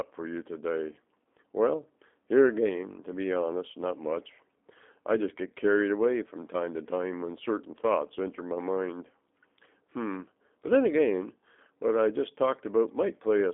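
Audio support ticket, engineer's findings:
G.729 codec, whole clip. Speech sounds rough and slightly synthetic, clearly audible, with narrow line band of about 250 Hz to 3.6 kHz and nothing above 3.8 kHz. Frame-by-frame filter-plus-pulse rebuild, which fits an 8 kbit/s G.729A leg.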